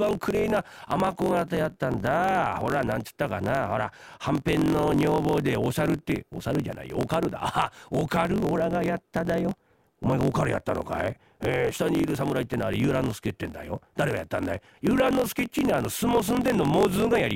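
Block size mismatch (truncated) runs throughout: block tails are discarded, consistent with 1024-sample writes, causing a 45.9 Hz buzz and speech 1.07 times faster with its timbre kept.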